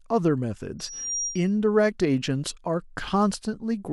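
From 0.79 to 1.51 s there's loudspeaker feedback squeal: the mic catches its own speaker, and a 5.7 kHz tone swells over a fraction of a second, sitting just under the speech.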